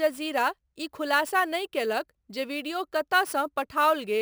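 Crude rate conversion runs through the whole clip, from start to end. The speech was resampled by simply repeating the nearest existing sample rather than filtering, and the uneven repeat pattern fits a step from 32 kHz up to 44.1 kHz, a ratio of about 1.38. That stepping creates shifted, inharmonic copies of the speech, sitting roughly 20 dB below it, heard as a gritty fizz that rides on the louder and brighter sounds.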